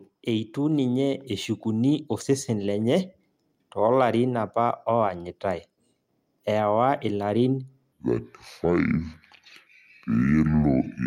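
From 0.29 to 2.78 s the automatic gain rises, lifting the level by about 4 dB over roughly two and a half seconds. Voice and background noise swell together, which separates it from a speaker simply talking louder, where the noise floor would stay put.

From 7.92 s to the end, a section plays at the wrong speed, at 0.61 times normal. Speech turns slow and drops about ten semitones. Because pitch and tempo shift together, this is not a pitch-shift effect; a player or editor running on a mismatched clock is the likely cause.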